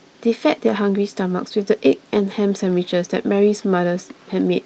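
At 2.69 s there is a lost packet rebuilt from error correction. One 20 ms packet went missing, and the decoder played the low-bitrate copy carried in the next packet. There is no gap, only a brief rough, noisier grain. A concealed loss would instead smear or stretch the preceding sound.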